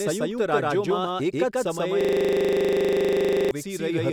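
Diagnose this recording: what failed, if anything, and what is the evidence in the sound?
A doubled audio track runs throughout: an equally loud, dry copy trails by roughly 150 ms, likely a second capture path or misaligned edit.

From 2.01 to 3.51 s, a system hang loop: one 40 ms slice repeats as a 25 Hz buzz while the frozen driver's ring buffer cycles.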